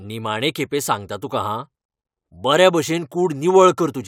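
No technical faults are audible.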